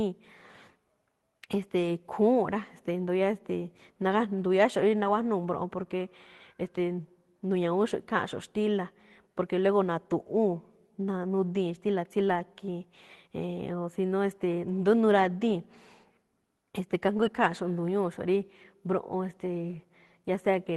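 Lost packets rebuilt from error correction occur at 4.99 to 5.09 s, just before "mbroꞌon porque", at 12.27 to 12.41 s, and at 17.17 to 17.23 s, lasting roughly 60, 80 and 40 ms. Each time, the decoder filled the missing stretch with the low-bitrate backup copy carried in the next Opus packet. There is no dropout, but those moments turn briefly rougher and noisier than the surrounding speech, which is limited to about 12 kHz by the call path.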